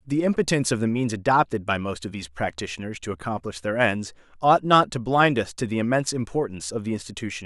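Nothing here calls for comment: the speech runs along without a single technical fault to point to at any moment.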